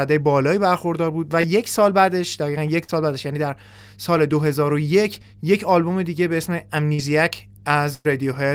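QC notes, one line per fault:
Throughout: mains hum. A ground loop or nearby transformer is leaking the 50 Hz power line into the signal, leaving a steady low tone roughly 25 dB beneath the speech.
1.41–1.46 s, 2.84–2.90 s, 6.94–7.00 s: short concealed packet loss. About 20, 40 and 40 ms of audio arrived too late, and the decoder bridged each gap by extending the preceding sound before blending back, heard as brief smears or wobbles.
7.94–8.07 s: burst of packet loss. About 100 ms went missing in one run. The receiver stretched the last sound and faded it, dropping into roughly 20 ms of silence before the speech resumes further on with that stretch gone.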